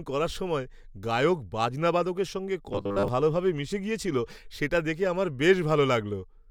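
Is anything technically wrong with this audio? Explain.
Yes. From 2.73 to 3.08 s, between "গায়ক বাজনা বাদকদের সঙ্গে" and "ভালভাবে মিশে গেছিল সেটা", there is robotic sound from repeated short buffers: a rigid metallic 100 Hz buzz. Audio likely arrived too late, so the last 10 ms block was looped for most of that stretch. A spectrogram would show evenly spaced horizontal stripes every 100 Hz, and the waveform would show identical 10 ms segments repeating.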